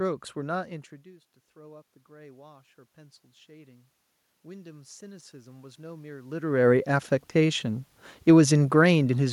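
From 1.54 to 3.95 s, automatic gain rising lifts the level by about 4 dB. The input had dropped about 22 dB. The gain control crept upward to compensate, so voice and room noise swell together. It happens again from 4.46 to 7.67 s, rising about 8 dB.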